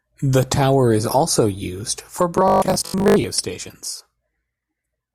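From 2.48 to 3.24 s the speech turns into a rigid, metallic buzz pitched at 50 Hz: robotic sound from repeated short buffers. Most of that stretch is likely a 20 ms buffer replayed over and over while fresh audio arrived too slowly, skipping the real signal.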